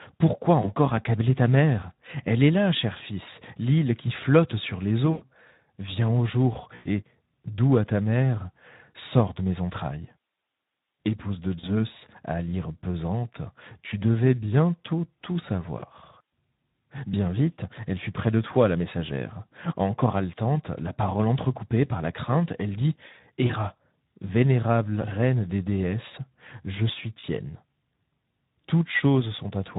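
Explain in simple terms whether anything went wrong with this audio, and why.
Speex codec damage runs through the whole recording: this older internet-call speech codec is working at a low setting, so the speech sounds noisy and hoarse.

VoIP packet loss concealed by the speech codec occurs at 0.61, 5.11, 6.75 (between "au jour" and "doux à ta mère"), 11.59, 15.80, 23.47 (after "la crainte elle dit") and 27.19 s (after "des déesses je suis"). Pieces of the call went missing, and the decoder filled each gap by stretching the last sound into a fading buzz or noise for about a twentieth to a seventh of a second.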